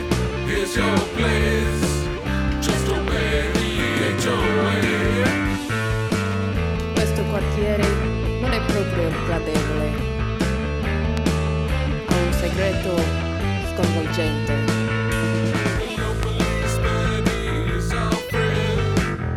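Three loud pops, each about 20 ms, at 3.08, 11.17 and 16.23 s, jump about 15 dB above the sound, likely from a brief voltage spike such as a switch or static.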